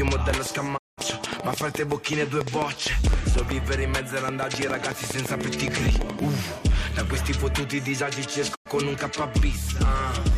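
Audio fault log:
0.08–6.20 s, train of clicks: around 40 similar sharp pops at about 7 per second, irregularly spaced, peaking roughly 10 dB above the programme and audible in quieter gaps too; likely interference from nearby equipment or a marginal interface injecting repeated impulses.
0.76–1.00 s and 8.54–8.68 s, digital broadcast dropout: the receiver muted after failing to decode incoming frames, fading out and back over about 20 ms. The holes last 192 ms and 96 ms, consistent with roughly six and three lost frames, and that audio is gone.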